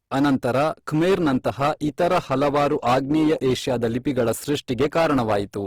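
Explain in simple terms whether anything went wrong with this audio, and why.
Two things went wrong. The first is hard clipping, present from start to finish. The speech was driven well past the loudest level the recording chain could pass, so the tops of the louder waves were sliced flat, hitting roughly one sample in ten. Those flattened peaks add a harsh, buzzing fuzz on every strong syllable. Unlike a codec problem, the distortion follows loudness: the louder moments sound roughest, and it never switches on or off at a particular point.

The second is an adaptive stream at a lower bitrate. At about 1.09 s the playback switches to a much leaner version of the stream and stays there until the end. From that moment the speech picks up more compression artefacts. What sets this apart from clipping is the sudden, clean step in quality at one instant, with no gap or dropout.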